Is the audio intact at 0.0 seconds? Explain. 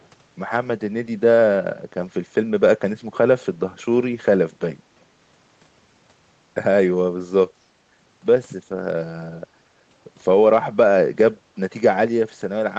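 No. From 0.0 to 0.07 s a very faint, delayed copy of the speech sits far beneath the direct sound, trailing it by 346 ms. This is likely an echo leak: loudspeaker playback reached the far-end microphone, and its echo canceller let a trace return.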